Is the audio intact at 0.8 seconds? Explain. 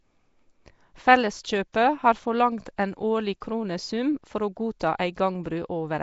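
No. At 0.8 s, as throughout the clip, the speech carries a rough, hissy halo and a smeared, underwater character, likely from Nellymoser compression, consistent with Flash's Asao codec at around 32 kbps. Each 256-sample block is coded at a fixed two bits a sample, so quiet bands lose their detail and are filled with noise. On a spectrogram, energy stops sharply at 7.7 kHz, and blocky, speckled noise patches replace fine harmonic structure below it.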